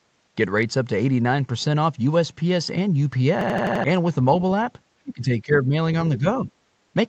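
At 3.41 s the speech freezes into a system hang loop. One slice of about 85 ms repeats exactly, five times, until 3.84 s. That slice length fits a 4096-sample buffer. The device kept replaying its ring buffer while the system stalled. It sounds like a machine-gun stutter at 11.7 Hz, and roughly 0.4 s of real speech is lost.

From 5.03 to 5.73 s the speech level drops, by about 20 dB at its deepest. Two shorter dips follow, at 6.18 to 6.25 s and 6.42 to 6.52 s, each by about 10 dB. The speech sounds ducked. This is likely speech suppressed in double talk. The echo canceller could not tell this talker from returning echo, so it turned the signal down. The Opus call path, with nothing above 8 kHz, carries these dips.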